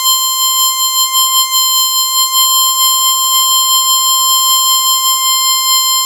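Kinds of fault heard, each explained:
No technical faults can be heard in this music clip. Nothing in the sound points to a problem in how it was captured, processed or delivered.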